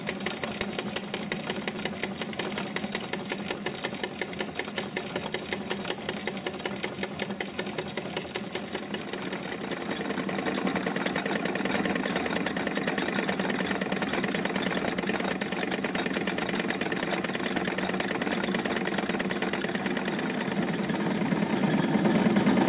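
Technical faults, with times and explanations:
3.54–3.61 s, skip ahead: Playback jumps forward here with almost no gap. Only a few milliseconds of joining material sit between the two sides. Around 0.4 s of audio is simply gone, and the later audio butts straight onto the earlier. The jump fits audio dropped on the way or discarded by an overfilled jitter buffer to catch up. The surrounding call sound, band-limited to 4 kHz, fits a G.711 mu-law link.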